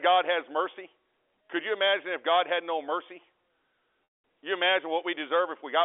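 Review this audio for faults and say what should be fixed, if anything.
Packet loss with pitch repetition at 4.04 to 4.24 s. About 200 ms drops out. The last pitch period repeats, fades to silence, then cross-fades back. Add jitter buffering or forward error correction to prevent such gaps.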